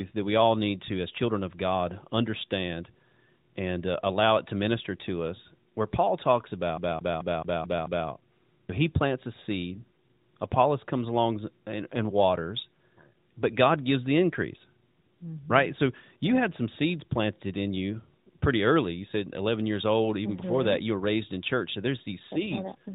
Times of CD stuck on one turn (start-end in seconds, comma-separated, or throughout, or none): 6.77-8.07